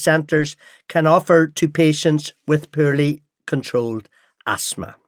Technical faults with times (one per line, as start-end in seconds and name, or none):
0.33-0.47 lost packet rebuilt from error correction
3.05-3.15 lost packet rebuilt from error correction